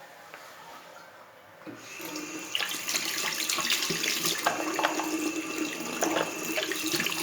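No technical faults can be heard.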